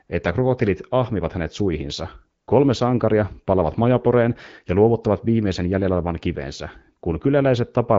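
AMR comfort noise appears at 0.07 to 0.09 s, just before "että krokotilit ahmivat hänet", and at 2.41 to 2.47 s, after "krokotilit ahmivat hänet suihinsa". Speech frames stopped for 20 and 60 ms, and the receiver substituted smooth synthetic noise over the AMR-WB 12.65 kbit/s stream.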